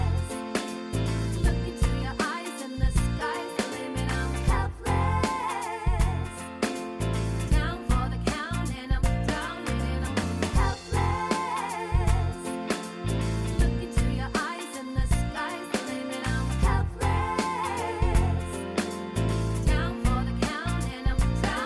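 No technical faults can be heard anywhere in the clip.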